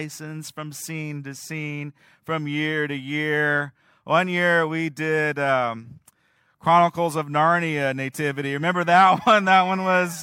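No technical faults can be heard anywhere in the speech, so there is nothing to describe in time order.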